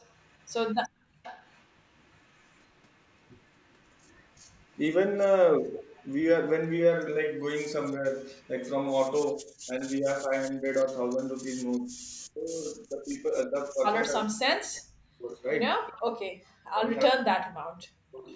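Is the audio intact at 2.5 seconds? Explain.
No. An echo leak runs from 0 to 6.12 s: a very faint copy of the speech trails 376 ms behind, likely from an echo canceller passing residual loudspeaker pickup.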